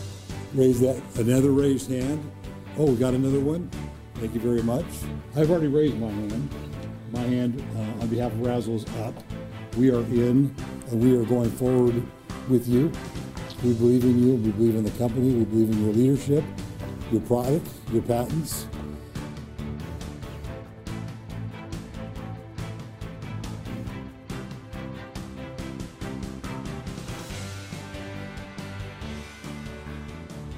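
No technical faults are audible.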